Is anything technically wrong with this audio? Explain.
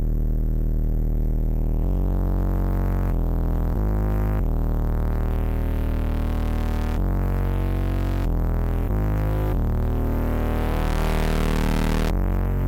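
No, nothing is technically wrong with this audio.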